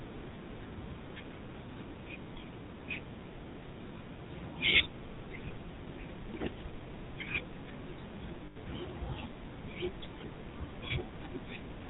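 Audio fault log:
Throughout, GSM full-rate codec: vocal-tract model driven by sparse pulses, as at 13 kbps full rate, cuts everything above 4 kHz, leaving speech plainly buzzy and gravelly.
3.98–4.01 s and 8.46–8.57 s, lost GSM frames: missing data replaced by repeating the last good frame, so speech briefly rings metallic, about 20 ms then 100 ms.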